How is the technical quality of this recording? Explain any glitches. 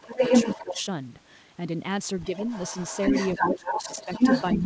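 The recording has two recurring problems: the far end of the call leaks into the signal, and the near talker's speech is pushed down when both sides talk at once.

Other side's voice leaking through, from 0.0 to 0.82 s and from 2.23 s to the end: a second voice sits in the background, roughly 5 dB louder than the main speech. The likely cause is that the talker's loudspeaker played the other party and the echo canceller let part of it back through the microphone. On a spectrogram this appears as a second set of harmonic stripes that does not line up with the main talker's. In the waveform, the gaps between the main talker's phrases stay filled with energy instead of dropping to quiet.

Speech suppressed in double talk, from 0.57 to 0.85 s and from 3.38 to 4.1 s: the main voice dips by up to about 10 dB in short pieces, adding up to roughly a fifth of a second in the first stretch and most of a second in the second. 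It likely happened because the echo canceller could not tell the talker from the overlapping echo and turned the whole signal down. The waveform envelope shows sudden notches, and on the spectrogram the talker's harmonics fade or break off in patches during those moments.

The call path itself is audible as a hard ceiling at 8 kHz. On the spectrogram nothing appears above that line, which fits a wideband call codec.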